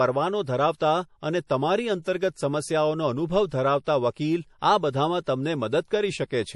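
Throughout the speech, nothing above 11.5 kHz and a plainly audible watery swirl point to heavy MP3 compression, likely at a low bitrate of about 48 kbps. Pre-echo appears at 2.02–2.06 s and 5.21–5.27 s: codec noise spreads ahead of sharp attacks, leaving a brief hiss of 42 ms and 56 ms and softened onsets.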